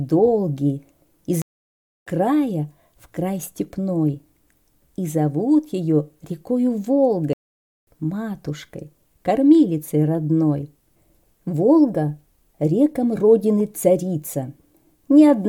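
Playback stalls, likely from the player running short of data or its thread blocking, silence the audio mid-flow from 1.42 to 2.07 s and again from 7.33 to 7.87 s.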